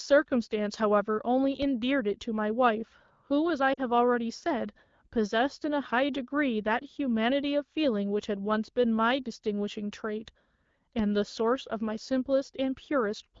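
At 3.74 to 3.80 s, lost AMR speech frames: a 40 ms gap, consistent with two 20 ms frames, concealed by repeating decoder parameters, heard as a brief drop to near silence in the AMR-WB speech.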